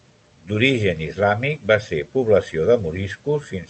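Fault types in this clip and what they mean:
No faults are present in this speech recording: the signal carries the ordinary coding character of a call path, with the top end stopping at about 8 kHz in a way that fits Opus wideband coding at a modest bitrate.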